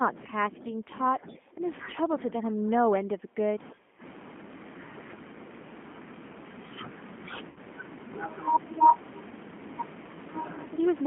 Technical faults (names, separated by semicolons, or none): G.729 codec; VoIP packet loss concealed by the speech codec